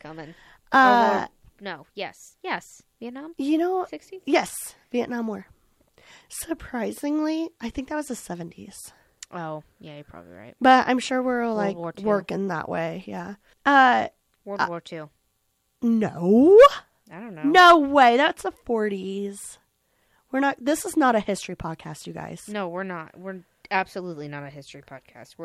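Nothing here calls for a timestamp, since the speech runs along without a single technical fault anywhere in the recording.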